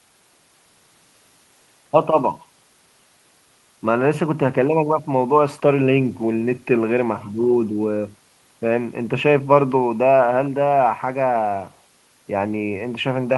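No technical faults can be heard anywhere in the recording.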